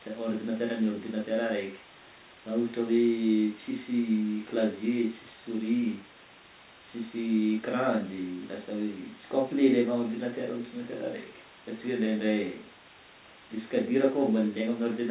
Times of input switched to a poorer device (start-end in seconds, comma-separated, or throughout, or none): none